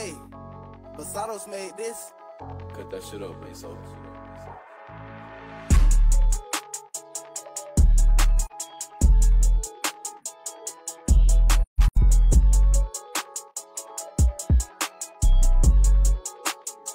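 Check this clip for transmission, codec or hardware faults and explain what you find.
The clip has a codec fault. AAC frame loss with muting occurs at 8.46–8.52 s, consistent with one lost frame of about 43 ms, and at 11.62–11.98 s, where about 256 ms of scattered losses include a gap of around 150 ms. The decoder silences each missing frame, and overlapping windows fade the sound out and back in, leaving soft-edged holes.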